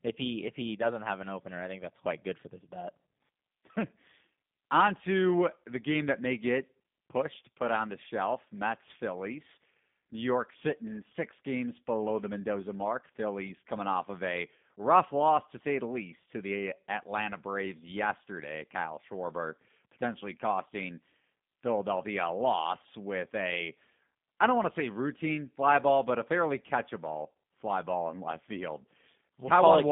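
From start to finish the speech runs through a G.729 codec, most likely the lighter G.729A variant at what sounds like 8 kbit/s. The talker is rebuilt from a vocal tract model and a few pulses per frame, so it comes across plainly rough and slightly synthetic, squeezed into a phone band of roughly 150 Hz to 3.6 kHz with nothing above 3.7 kHz.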